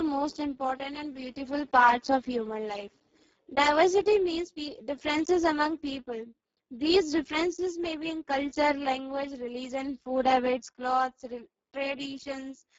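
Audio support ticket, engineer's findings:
Speex codec artefacts throughout: speech hoarse, noisy, edging robotic, fitting a very low bitrate near 6 kbps. Nothing above 7.7 kHz, and the upper band is just noise-like fill.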